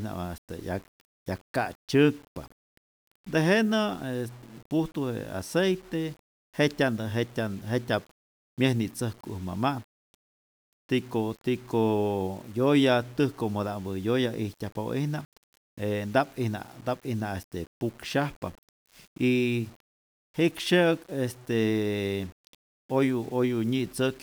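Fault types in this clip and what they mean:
Low bit depth without dither: grainy distortion follows the speech throughout, and quiet passages turn gritty, which fits likely 7-bit rounding without dither, with error around 30 dB below the signal.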